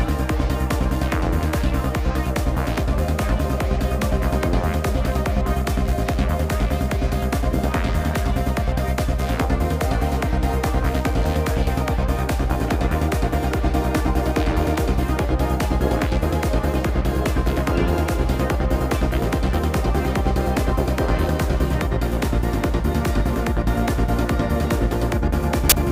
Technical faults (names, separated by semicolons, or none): file tags played as audio